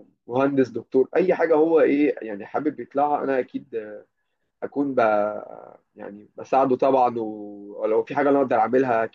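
No technical faults can be heard in the clip.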